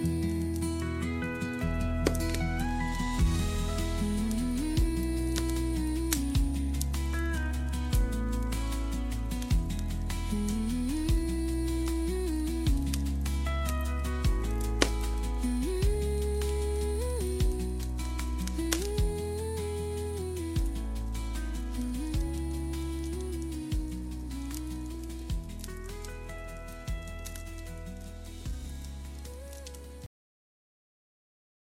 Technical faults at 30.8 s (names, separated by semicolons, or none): cut-off end